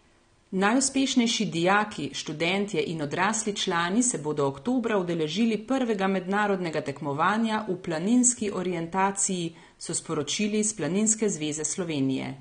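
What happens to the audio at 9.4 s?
The speech at 9.4 s, like the whole clip, was likely squeezed through AAC compression at a low bitrate, consistent with about 32 kbps. The encoder discarded everything above 9.7 kHz and coarsely quantised what remained, so the sound is dull and smeared, with audible warbling on sibilants.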